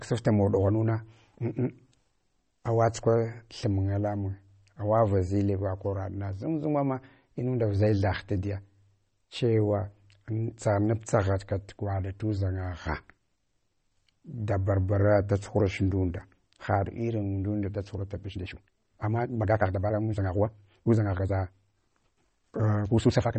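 Throughout, the speech has nothing above 8.4 kHz and a plainly audible watery, swirling texture on s sounds, likely from MP3 compression at a bitrate that fits about 32 kbps. The fixed treble ceiling plus flickering weak detail separates it from plain low-pass filtering.

From 18.31 s to the end at 23.38 s, the pace jumps to 1.66 times faster while the pitch stays put, sounding rushed, likely a time-stretched section. Because the pitch holds steady, this is not a sped-up playback fault.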